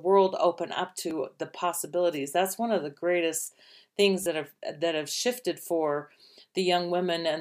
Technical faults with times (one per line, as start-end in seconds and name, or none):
1.10 repeated buffer
4.23-4.26 repeated buffer